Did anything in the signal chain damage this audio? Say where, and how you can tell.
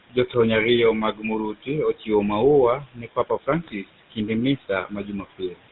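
Yes, at three stages: call processing, the codec and the network.

The noise suppressor artifacts run the whole clip. The room noise, about 18 dB below the speech, gets pulled down by about 18 dB in the gaps and then swells back under the speech. That pumping is the suppressor guessing noise bands frame by frame.

The same suppressor also eats into the speech in places. Speech cut by the noise suppressor shows up at 0.10–0.35 s, just before "ariyo mag". It happens again at 1.13–1.25 s and 1.52–1.69 s, both just after "ariyo mag". Then come 1.93–2.09 s, 2.79–4.29 s and 4.57–5.60 s. The dips reach about 13 to 18 dB. The 2.79 s stretch is the worst, with roughly 0.7 s of soft sound swallowed along with the background.

The whole clip also carries the GSM full-rate codec sound. Nothing comes through above 4 kHz. On top of that there's the buzzy, gravelly grain you get when a vocal-tract model is driven by sparse, regularly spaced pulses. 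The damage is plainly audible and fits the 13 kbps full-rate coder.

Finally, GSM bit errors hit at 3.66–3.72 s. There's a short squawky, gargled burst where the level and spectrum jump oddly for a moment. That's corrupted filter, pitch or gain parameters reaching the decoder over a weak link. The length points to about three 20 ms frames going bad in a row.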